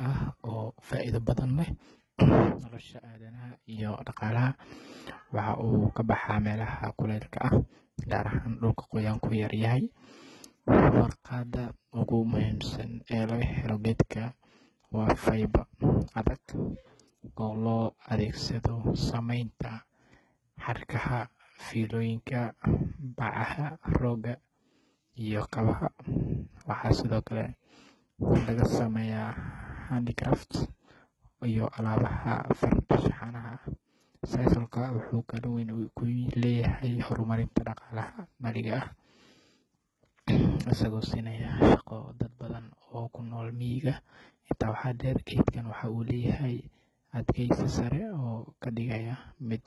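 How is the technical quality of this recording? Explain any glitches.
The recording is heavily degraded by coding damage that runs the full length of the speech.

HE-AAC compression, likely HE-AAC v2, is audible from start to finish. Nothing remains above 11.8 kHz, and the upper band sounds synthesised rather than captured. The encoder keeps only the lower spectrum and fills in the treble by copying lower bands upward under a coarse envelope, so the top end reaches high but its harmonics no longer line up with the speech below. Sibilants come out gritty, metallic or lispy. The damage is heavy, which fits a very low bitrate around 16 kbps.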